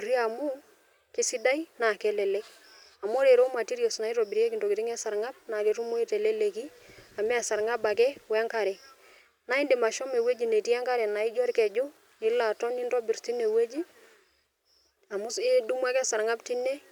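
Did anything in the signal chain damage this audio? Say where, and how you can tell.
No, nothing along the way from capture to playback has left any damage you can hear on this speech recording.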